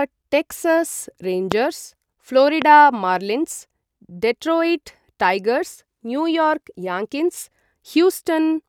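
Speech clip with two loud pops, at 1.52 to 1.54 s and 2.62 to 2.64 s, each peaking about 15 dB above the speech, likely from an electrical voltage spike such as a plug or switch transient.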